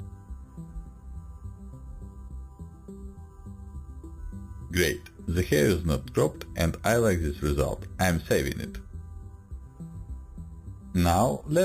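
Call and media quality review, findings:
Imaging from sample-and-hold upsampling, present from start to end. Bright metallic fizz at about -17 dB relative to the signal; the first mirror image fills 4 to 8 kHz. Likely component: an 8 kHz to 44.1 kHz rate converter that repeats samples without an interpolation filter. Unlike hiss, the fizz rises and falls with the sound. Unlike aliasing, the image lies above the original band, mirrored about 4 kHz.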